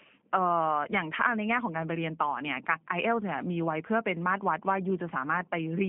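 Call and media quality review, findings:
G.729 codec damage throughout the speech. The band runs roughly 150 Hz to 3.4 kHz, with nothing above 3.5 kHz. The texture is plainly rough and synthetic, which fits an 8 kbit/s G.729A VoIP path. Mechanism: each 10 ms frame is rebuilt from a vocal tract filter, a pitch predictor and sparse pulses. Unlike simple band-limiting, the damage extends beyond the missing top end, since the sound inside the band is also coarsened.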